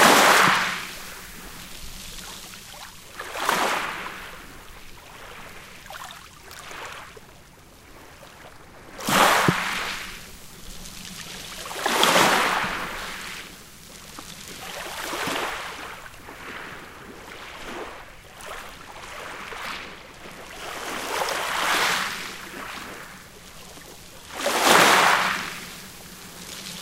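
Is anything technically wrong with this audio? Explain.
No, nothing technically wrong can be heard here.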